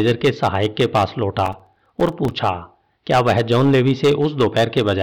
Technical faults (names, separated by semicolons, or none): hard clipping; processor overload crackle